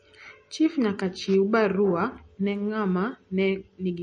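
It's a short speech recording with MP3 compression damage running the whole way through. The treble stops dead at 9.4 kHz, and the sound has that watery, swirly texture where weak detail flickers in and out. Likely an encoder starved of bits, which fits something around 34 kbps.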